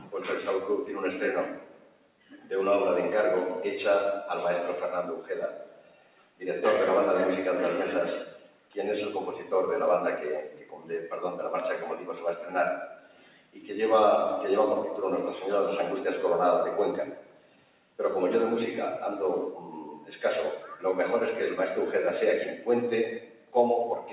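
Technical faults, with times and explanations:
Throughout: noise suppressor applied to music or sounds. A speech-oriented suppressor stays active over the whole clip and treats sustained, steady material as background noise. Its gain rides up and down by around 10 dB as it decides what counts as signal, so the level audibly pumps and held parts thin out while sharper onsets pass largely intact. This is heard through a band-limited call path with nothing above 4 kHz, which fits G.711 A-law at 64 kbps.
0.00–2.51 s, 5.16–6.41 s, 8.31–8.76 s, 10.43–13.64 s, 17.06–17.99 s, 19.96–20.85 s, 22.56–24.12 s: sound cut by the noise suppressor. In each of these stretches the suppressor classifies the sound as noise and pulls it down harder than the surrounding material, by about 11 dB at its deepest and about 9 dB in the 19.96 s span. Sustained and decaying portions sink or have their tails clipped off, while transients come through. 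The dips last from roughly half a second to about two seconds each.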